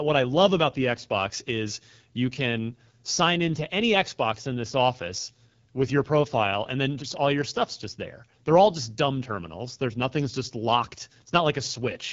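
From start to finish, the speech passes through the AMR wideband (HD Voice) codec, and the damage is plainly audible. The codec models the vocal tract and drives it with pulses, coding detail only up to 6.4 kHz. Above that, up to 7 kHz, it adds shaped noise. Here too few bits reach the model. The speech comes out rough and raspy, with a gritty edge. This points to one of the lowest rates, about 8.85 kbit/s.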